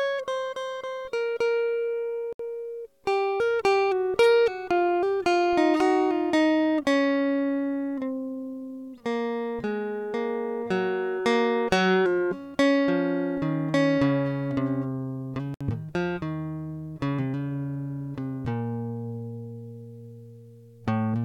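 At 2.33 s and again at 15.54 s the music drops out for about 67 ms and then 64 ms: a gap at a join of encoded pieces. Each piece kept its encoder's leading delay and padded last frame, so a short silence with smeared edges opens before the music resumes where it stopped.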